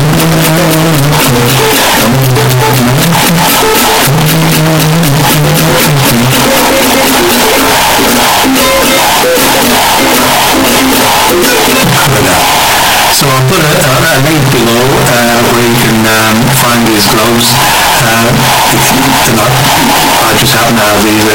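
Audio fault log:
Throughout, float read as integer: the whole clip is extremely loud and harsh, pressed into a near-square waveform sitting at an almost fixed, high level, with quiet background noise blown up to the same level as the main sound, though its pitch movement can still be traced. This is likely 32-bit float samples being read as 32-bit integers, so each value comes mostly from its sign and exponent bits rather than its true amplitude.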